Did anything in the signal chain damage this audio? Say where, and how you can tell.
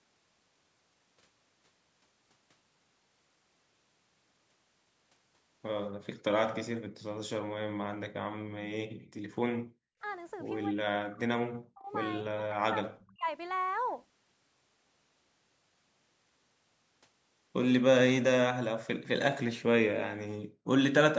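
Yes. Background gated by the echo canceller: call processing pulled the microphone down about 40 dB at 6.92–7.01, 8.42–10.01 and 20.44–20.67 s, so room sound briefly vanishes.

Speech suppressed in double talk, likely from the canceller failing to separate near speech from loudspeaker echo: from 10.73 to 13.28 s, speech repeatedly dips deeply or cuts out.

Echo leak, likely residual loudspeaker pickup the canceller missed: at 13.0–13.16 s a very faint copy of speech returns roughly 284 ms late.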